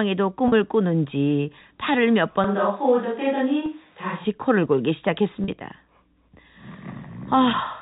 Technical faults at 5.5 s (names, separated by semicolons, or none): packet loss with pitch repetition